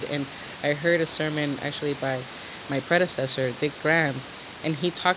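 No technical faults can be heard in this speech. The room noise sits about 17 dB below the speech, and the call path's G.711 mu-law coding at 64 kbps leaves nothing above 4 kHz, giving the familiar narrowband telephone sound.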